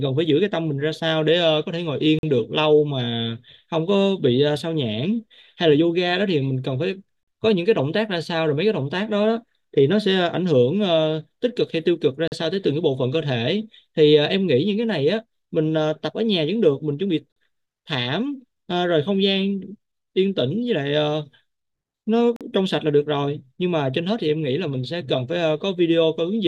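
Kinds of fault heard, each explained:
Gap between chunks: the speech arrives in 5 s chunks, and silence is inserted at each join rather than sound being lost. Short hard-edged holes of about 44 ms interrupt the speech at 2.19, 7.23, 12.28, 17.32 and 22.36 s, evenly spaced.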